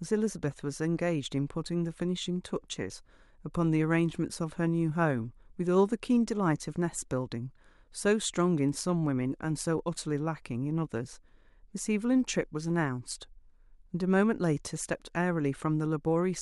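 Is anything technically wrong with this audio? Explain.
No, nothing is technically wrong with this audio.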